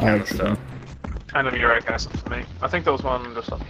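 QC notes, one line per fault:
0.73–3.69 s, call bitrate drop: bandwidth shrinks from 20 kHz to 8 kHz with watery coding roughness, fitting a fall toward 8 kbps, unlike a plain low-pass filter.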